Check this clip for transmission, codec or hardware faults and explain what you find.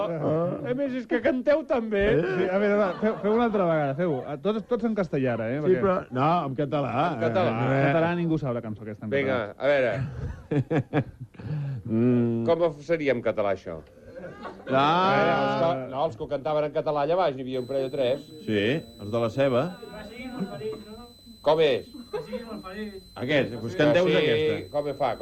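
A switching supply whistle enters at 17.53 s and continues to the end at 25.22 s. A switching power supply has dropped into an audible burst mode, or is beating against another supply, and its switching leaks into the audio as a thin whistle near 4 kHz. The pitch wanders between 3.97 and 4.06 kHz, roughly 30 dB below the sound.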